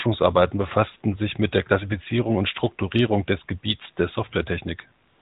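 From 5.08 to 5.21 s, the background becomes a smooth, steady hiss. This is AMR comfort noise: synthetic filler inserted once the phone stopped sending speech frames.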